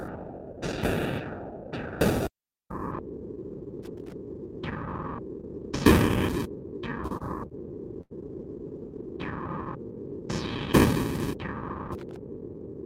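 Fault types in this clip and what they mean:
Loose connector crackle: a worn contact making and breaking, chopping the signal into irregular scratchy bursts near 3.8 and 12.0 s, unlike the smooth held sound of a stall.
Short stall from a late packet: the receiver holds the last sound for 24 to 91 ms while waiting, with nothing lost, around 7.1 to 8.1 s, heard as stretching rather than crackle.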